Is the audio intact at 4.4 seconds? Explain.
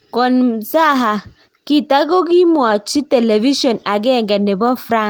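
Yes, the audio is intact at 4.4 seconds, with no dropout, click or other fault at that moment.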